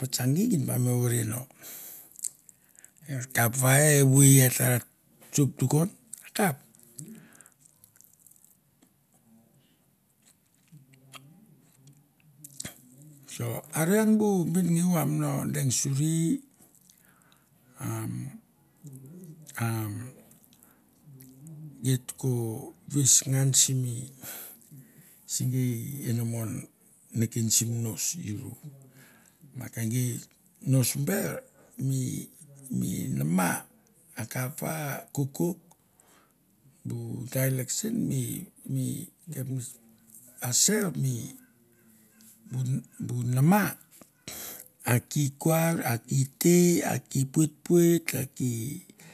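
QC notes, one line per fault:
No faults found in the speech. Nothing here calls for a QC entry.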